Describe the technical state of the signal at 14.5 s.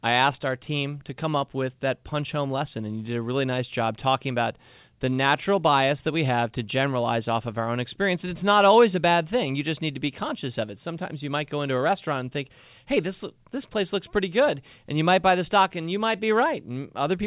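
At 14.5 s the speech is intact, carried cleanly through the A-law G.711 telephone coding with no fault present.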